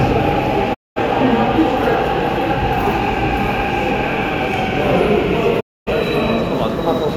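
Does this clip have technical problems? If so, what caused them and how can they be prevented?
Yes, there are two digital broadcast dropouts. The audio quickly fades out over about 20 ms at 0.73 s and comes back at 0.99 s, then does the same from 5.59 s to 5.92 s. The receiver lost the signal or got frames that failed their checksum, so it muted until clean frames arrived. Roughly 213 ms and 256 ms of programme are simply gone, which fits five and six lost frames of about 43 ms each. To prevent it, improve reception with a better antenna, placement or signal margin so the receiver keeps decoding cleanly.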